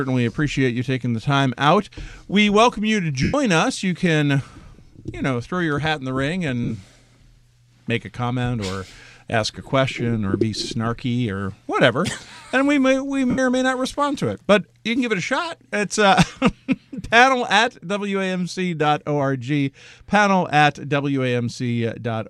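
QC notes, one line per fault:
3.23–3.34 s: lost LE Audio frames. About 105 ms of frames are missing, which fits 7.5 ms LC3 frames. The decoder fills the gap by reusing the last spectrum with random signs and fades it after a few frames, so tonal content turns into a noisy smear that sags in level before the audio resumes.
6.63–6.72 s: lost LE Audio frames. This is a scattered loss of about 52 ms spread over 75 ms, with the longest run at around 30 ms. Each short concealment swaps the real spectrum for a sign-randomised copy, so the passage sounds grainy and stuttering rather than showing one clean dropout.
13.30–13.39 s: lost LE Audio frames. About 75 ms is missing and concealed in the same way, with the repeated spectrum and randomised signs fading after the first few frames. Tones smear into noise and briefly thin out. The light lossy coding around this point is not the cause of the damage.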